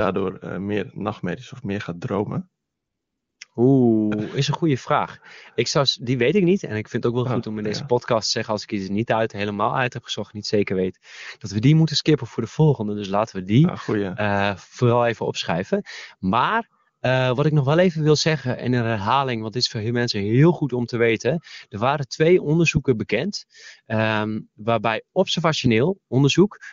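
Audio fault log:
2.63–3.39 s, AMR comfort noise: after "of meer gaat dromen" the phone judged the talker silent and stopped sending speech frames for 0.76 s, and the receiver substituted smooth synthetic noise. On a spectrogram the real background gives way to an even, featureless wash with sharp edges. The waveform shows a flat, steady noise floor. The surrounding wideband speech sounds clean, which points to a high AMR-WB rate.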